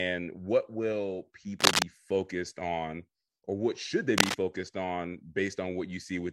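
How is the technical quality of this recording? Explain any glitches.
The recording has two audible glitches, both cable scratch noise. From 1.59 to 1.83 s, just after "what will", and from 4.18 to 4.36 s, just after "or what should they", dense, uneven scratching rides over the speech. The first burst is about 10 dB above the voice and the second about 5 dB above it. The likely cause is a worn cable or connector being moved so that its contact resistance flickers rapidly. Unlike a single click or a digital dropout, each event is a continuous, irregular rustle lasting about a fifth of a second.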